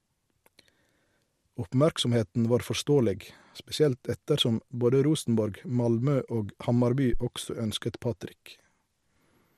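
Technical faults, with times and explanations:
7.13 to 7.20 s, phantom power thump. A deep, blunt thud is heard here. A supply on the live input was switched, and the sudden voltage step passed through the coupling capacitors into the signal path. That step reaches the output as a single low-frequency pressure pulse rather than a click. The thump dies away fast, with a decay of about 16 ms. The whole event is over in roughly 70 ms.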